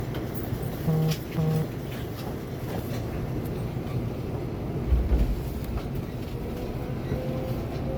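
From start to finish the sound has a swirly, hollow character, with smeared transients and blurred attacks, more degraded than a single 128 kbit/s MP3 pass would explain. The likely cause is generation loss: the audio appears to have been decoded and re-encoded as MP3 around seven times, each pass requantising on a shifted frame grid so that noise and spectral holes accumulate. The bandwidth itself holds up, extending to about 20.1 kHz.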